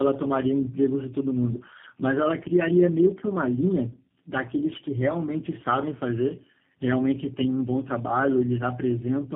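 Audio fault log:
Throughout: tandem speech coding. The speech is rough, muffled and warbly, with nothing above 3.7 kHz. This fits three low-rate speech coders in a row, such as AMR-NB, GSM full rate and G.729A, each re-encoding the previous one's already degraded output.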